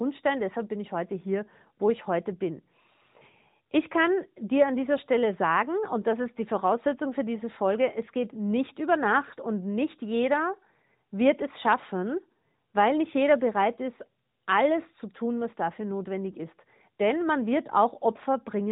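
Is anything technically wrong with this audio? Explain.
No, nothing is technically wrong: the speech has the expected nothing-above-4 kHz band limit of the AMR narrowband mobile codec, with only light coding texture that fits its top 12.2 kbps mode.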